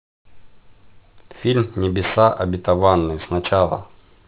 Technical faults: aliasing

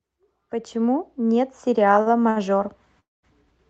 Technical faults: short stall from a late packet; call audio freeze

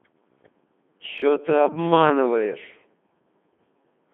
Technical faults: Codec 2 vocoder; chunks out of order

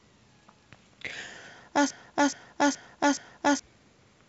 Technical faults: broken-record loop

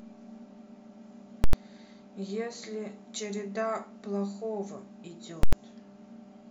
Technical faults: invalid numbers at full scale

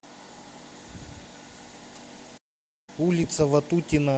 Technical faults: lost packet rebuilt from error correction; playback stall

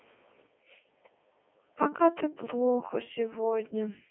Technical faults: Codec 2 vocoder

